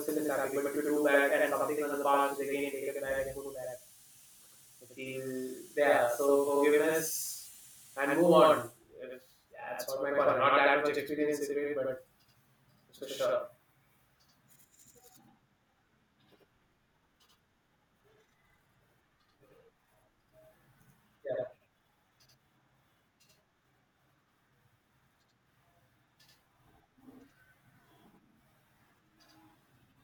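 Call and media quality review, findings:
Channel delay (doubling), throughout: speech doubled by a same-level slap about 85.33 ms behind. One channel is late, likely from a 4096-sample buffer, then summed to mono. Waveform shows every onset repeated at equal amplitude; spectrogram shows doubled onsets.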